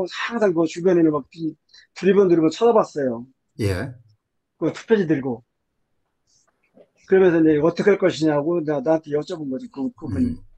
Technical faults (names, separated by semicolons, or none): none